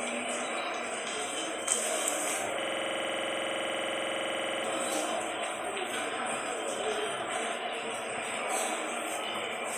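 From 2.62 s to 4.64 s the sound stops moving forward and turns into a hard, rattling stutter. A single fragment of about 46 ms repeats exactly, some forty-odd times over roughly two seconds, at a rate of 21.5 Hz. That is fast enough to blur toward a coarse buzz but still heard as separate hits. This is a system hang loop: the computer or its audio driver froze, while the sound hardware kept replaying the same stretch of its ring buffer, which fits a 2048-sample buffer.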